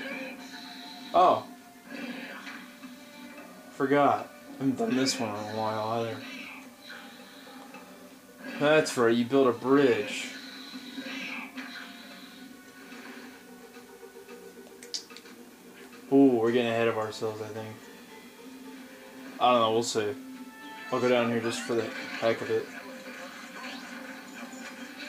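A grainy, gritty distortion runs through the whole clip and shifts with the sound itself, roughening quiet passages most and making the faintest moments sputter or drop out entirely. The likely cause is low bit depth without dither: the audio seems to have been rounded to 8 bits with no dither added, so the rounding error tracks the signal instead of becoming a steady hiss, sitting roughly 30 dB below the sound.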